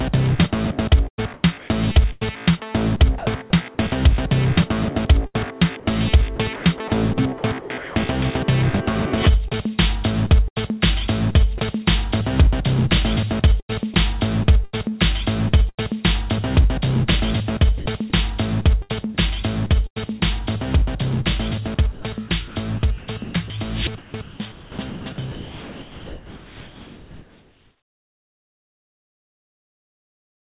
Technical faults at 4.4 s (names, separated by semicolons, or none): none